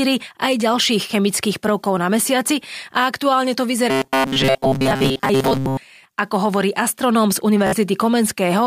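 From 3.90 to 5.79 s the speech turns into a rigid, metallic buzz near 133 Hz that only loosely tracks the words. This robotic sound from repeated short buffers is likely a slice of about 7.5 ms replayed over and over through most of that stretch while fresh audio went missing.

At 7.67 to 7.73 s a brief Bluetooth stutter breaks in as a run of repeated slices. The receiver kept replaying its last buffer across roughly 58 ms of lost audio, which fits a handful of dropped packets, and the speech then resumes further along.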